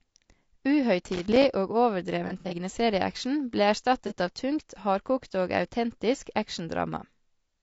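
Throughout, the speech sounds rough and grainy, with noise filling the gaps between harmonics and a thin, synthetic-sounding top band. This is likely low-delay AAC compression at a low bitrate, plausibly around 32 kbps. The short frames resolve pitch structure poorly, which gives a steady roughness rather than the warbling of ordinary low-rate AAC.

From 1.07 to 1.47 s there is loose connector crackle. A worn or dirty contact making and breaking chops the signal into an irregular burst of scratchy crackle. It breaks into the audio itself rather than simply sitting on top of it. Its ragged, uneven texture sets it apart from a clean dropout.

Between 2.27 and 2.54 s comes AAC frame loss with concealment. About 120 ms of audio is missing, scattered over roughly 240 ms, with the longest gap around 70 ms. The decoder patches each gap from the last good spectrum, so the sound turns smeared, noisy and phasey instead of going silent.

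A second, single frame loss with concealment at 4.07 to 4.13 s replaces 30 ms with a brief smeared blur. It is too short to fade toward silence.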